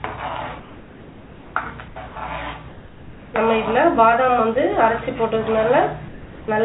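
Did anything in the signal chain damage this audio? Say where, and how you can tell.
Yes. At the call-processing stage, the sender's discontinuous transmission likely stopped sending during pauses, and the receiver filled them with comfort noise in place of the background. At 0.6 to 1.56 s, 1.88 to 1.96 s, 2.68 to 3.34 s and 6.08 to 6.48 s, the real ambience, sitting about 19 to 22 dB below the loud passages, turns into a steady, featureless hiss that is about 2 to 5 dB quieter, then snaps back when sound resumes.

The same mechanism also produced sound dropped by the voice detector. From 2.08 to 2.16 s, the detector likely judged a quiet stretch as background and cut transmission. About 30 ms of real sound goes missing and is replaced by that flat synthetic noise before the signal returns. Throughout the clip, nothing reaches above 4 kHz, consistent with a narrowband G.711 call codec.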